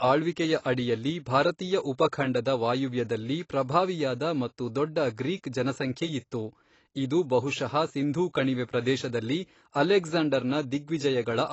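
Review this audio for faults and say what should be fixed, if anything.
AAC compression damage runs through the whole speech recording and is plainly audible. Nothing is present above 8 kHz, so the sound is dull and lacks air. Sibilants and held sounds are smeared, with a warbling, fizzy texture. The likely cause is low-bitrate AAC-LC encoding. The encoder had too few bits, so it dropped the top of the spectrum and coded the rest coarsely. The damage fits roughly 24 kbps. To prevent this, encode from the original at a much higher bitrate or keep a lossless master.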